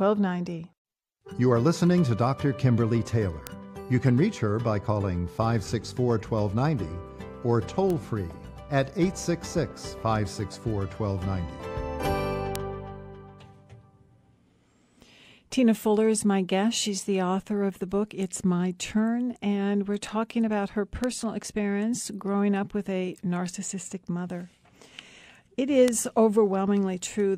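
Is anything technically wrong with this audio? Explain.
Yes. There are bit error spikes at 3.47, 7.90, 12.56, 21.04 and 25.88 s. In each, a flipped bit in a stored or transmitted value throws one sample, or at most a few adjacent ones, away by a power of two before it snaps back. The peaks reach about -7 or -13 dBFS regardless of the surrounding material, so each is heard as a single sharp, broadband tick with no relation to the audio around it.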